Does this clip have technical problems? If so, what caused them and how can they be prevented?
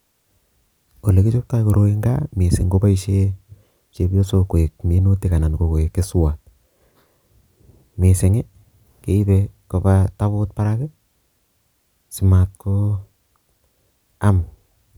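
No, the signal shows no technical problems that can be heard, so there is nothing here to trace to a cause or to prevent.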